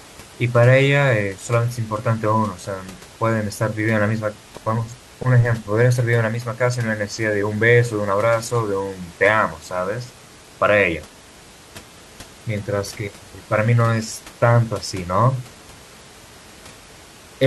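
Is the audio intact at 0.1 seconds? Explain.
Yes, the audio is intact at 0.1 seconds, with only the room's own background noise sitting about 23 dB below the speech.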